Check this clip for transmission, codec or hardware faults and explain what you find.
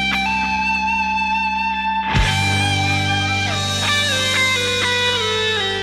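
One fault is present. From 3.41 s to the end, a feedback whistle: a thin, steady 3.8 kHz tone just under the sound, likely from a loudspeaker-microphone loop held at the edge of feedback.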